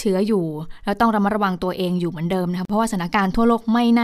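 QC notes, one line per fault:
2.65–2.70 s, gap at a join of encoded pieces: the speech was encoded as separate segments and spliced without trimming each run's start-up delay and padded final frame, so leftover encoder silence sits at the seam. The result is a dropout of about 44 ms in continuous speech, with its edges smeared by the codec, after which the audio resumes exactly where it broke off rather than skipping ahead.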